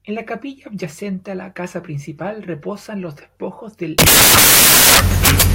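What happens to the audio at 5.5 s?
At 5.5 s the audio is inside a stretch of samples built from the wrong bytes, which runs from 3.99 s, just after "principal reposan los despojos", to the end at 5.55 s. The bytes of each sample are being assembled wrongly, offset, swapped or misaligned, so the rapidly varying low-order bits land in the high-order position. The result is loud, harsh broadband noise in place of the speech, close to white on the loud sounds.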